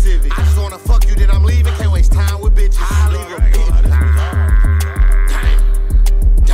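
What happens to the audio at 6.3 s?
Nothing goes wrong at 6.3 s; the audio there plays through intact, with no dropout, click, distortion or other fault.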